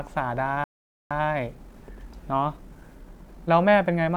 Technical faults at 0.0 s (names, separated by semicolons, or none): none